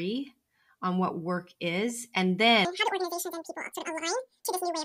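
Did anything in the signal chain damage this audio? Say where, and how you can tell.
Yes. From 2.65 s, right after "what work is and", to the end, the speech is an audio read two samples at a time (double speed) fault from a sample-format conversion error, where pairs of samples were taken as one frame. Playback runs at 2.0 times speed and an octave higher. On a spectrogram, harmonics and formants jump to twice their frequency at that point. On the waveform, syllables compress to half their length.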